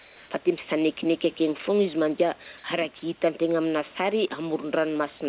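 From the start to 0.3 s, the background is a steady, featureless hiss about 2 dB quieter than the room sound that follows, lacking its detail. This is comfort noise in place of the background, likely synthesised by the receiver while the sender's voice detector paused transmission.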